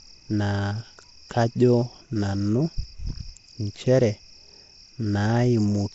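Nellymoser compression throughout: rough, hissy, underwater-smeared speech with nothing above 7.7 kHz, likely the Nellymoser Asao codec filling bit-starved bands with noise, consistent with 32 kbps.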